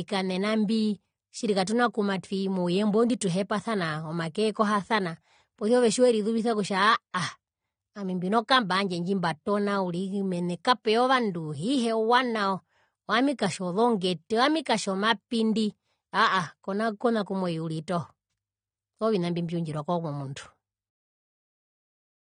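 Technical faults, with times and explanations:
Throughout, AAC compression: the speech is dull and smeared, with nothing at all above 9.7 kHz, and the codec damage is plainly audible as a watery, fizzy edge on sibilants and held sounds. That's likely an AAC-LC encode squeezed hard, something around 32 kbps by the sound of it. At that rate the encoder drops the top band entirely and quantises what's left so coarsely that parts of the spectrum go missing or get noise-filled.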